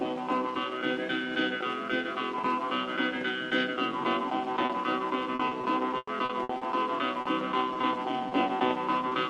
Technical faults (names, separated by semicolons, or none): short concealed packet loss; repeated packet loss (robotic sound)